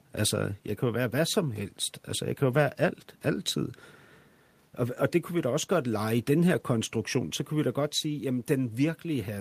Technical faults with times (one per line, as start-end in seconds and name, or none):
1.59-1.65 lost packet rebuilt from error correction
2.51-2.57 lost packet rebuilt from error correction
6.47-6.61 lost packet rebuilt from error correction